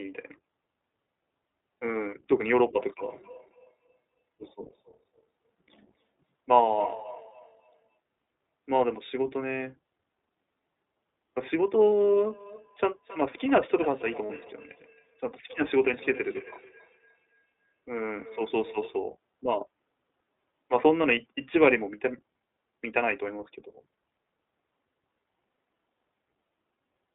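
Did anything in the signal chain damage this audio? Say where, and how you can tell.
Yes, at three stages. The codec is the first one: the whole clip is band-limited to roughly 250 Hz to 3.6 kHz and sounds rough and a bit synthetic throughout. That's iLBC coding each 20 ms frame on its own, and the damage fits its 15.2 kbps mode.

Then there's feedback echo between two devices, at the call-processing stage, from 3.02 to 8.0 s and again from 12.11 to 19.02 s. The speech comes back around every 300 ms, peaking about 19 to 20 dB under the voice. A second device in the room is replaying the far mic, and no canceller owns that path.

Last, lost iLBC frames on the network side. There's a brief buzzy held-vowel smear at 11.92 s lasting 20 ms, and a longer one from 14.26 to 14.31 s lasting 40 ms. Those fit one and two dropped frames, with the decoder repeating the last pitch cycle and recovering immediately.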